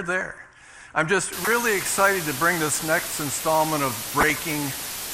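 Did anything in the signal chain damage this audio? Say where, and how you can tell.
Yes. There are three separate kinds of damage.

Throughout the clip the sound is dull and has a gurgling, granular texture. The highs seem switched off, and what remains sounds coarse. This points to the codec stage, most likely MP2 compression at a low rate of around 80 kbps. Layer II splits the audio into 32 sub-bands and shares bits between them. When there are too few bits, upper bands drop out and the rest are quantised roughly.

From 1.33 s to the end, a steady, even hiss sits under everything. It is nearly as loud as the sound itself, yet there is no harsh distortion. That is low bit depth with dither, from a sample-format conversion stage. The hiss level suggests only about 5 bits survive. Dither was added before rounding, so the rounding error turned into flat white noise rather than distortion.

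Two short bursts of burbling sit on top of the sound. One runs from 1.45 to 1.53 s, and a longer one runs from 4.19 to 4.40 s. This is DAB burbling, a transmission fault. Bit errors got past error correction into the MP2 data. Corrupted samples put short blips of noise into single sub-bands. The first burst hits 5 frames and the second hits 9.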